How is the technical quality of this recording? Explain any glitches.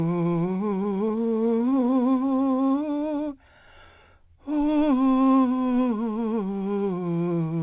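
The music carries one glitch, a burst of repeated stalls (stutter) from 0.46 to 1.94 s, heard over a call path whose sharp 4 kHz band limit fits G.711 mu-law.

Repeated stalls (stutter), 0.46 to 1.94 s: packets arrived late, so the jitter buffer kept running dry. About 25 brief gaps, none over 14 ms, were filled by extending the last sound, covering roughly a sixth of that stretch. The music drags and judders without dropouts. A waveform shows small repeated segments, and a spectrogram shows short smeared, frozen slices.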